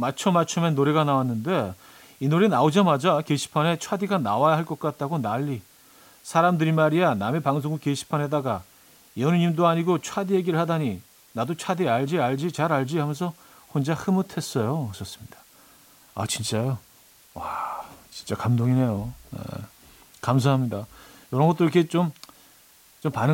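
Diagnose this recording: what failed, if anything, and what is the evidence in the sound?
Sample-format conversion failed: the speech was reduced to what sounds like 8 bits with dither, leaving a constant, even hiss roughly 30 dB below the speech for the whole clip, with no distortion. A spectrogram shows a flat floor filling every frequency and every pause; the waveform never settles to silence.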